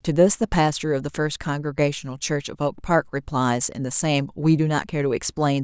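Nothing stood out as a technical fault on listening to this speech recording.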